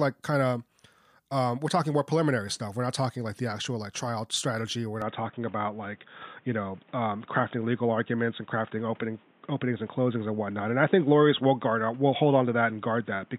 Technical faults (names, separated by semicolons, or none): input switched to a poorer device